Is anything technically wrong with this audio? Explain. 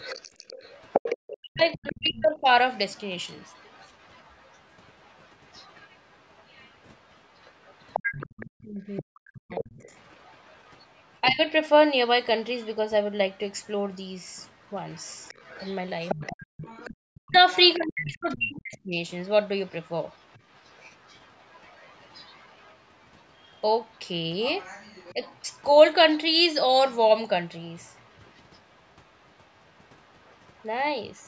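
Yes. Two related problems run through this speech clip.

A second, fainter voice, the other side's voice leaking through, sits under the main talker from 0.0 to 12.68 s, 14.39 to 26.17 s and 27.84 to 31.26 s. It is roughly 20 dB down at first, a little lower in the middle stretch and barely audible, about 40 dB down, at the end. The likely cause is the far end playing from a loudspeaker into the microphone, with the echo canceller leaving a residue. Unlike crosstalk or a bleed from a second microphone, it shares the call's 8 kHz ceiling.

Speech suppressed in double talk shows as the main voice sinking while the other side talks over it. It drops deeply, by roughly 40 dB, at 1.04 to 2.48 s, 8.65 to 9.72 s and 16.14 to 18.96 s. It dips less, by roughly 15 and 10 dB, at 11.28 to 11.41 s and 25.13 to 25.22 s. The likely cause is the canceller treating both voices as echo and ducking them together. 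Network dropouts would cut out whether or not anyone else was speaking, and these dips happen only during overlap.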